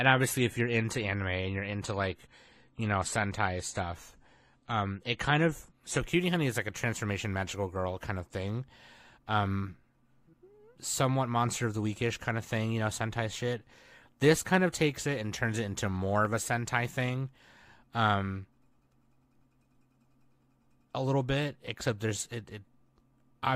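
Adaptive stream starting at a low bitrate, 0.0 to 6.0 s: the player began on a cheap version, which fits roughly 32 kbit/s AAC, with nothing above 14 kHz, then jumped cleanly to a fuller, clearer stream.

CD scratch ticks, 15.97 to 16.54 s, just after "and turns it into": three brief ticks, each well under a millisecond, where disc damage defeated error correction once per revolution.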